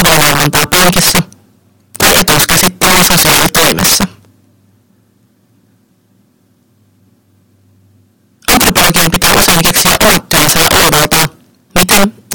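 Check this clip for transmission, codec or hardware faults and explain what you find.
There's one clear problem, present all the way through. Integer overflow: the level's pushed about 15 dB too hot, so around 7 percent of samples wrap to the opposite sign instead of clipping, giving violent cracks on loud speech.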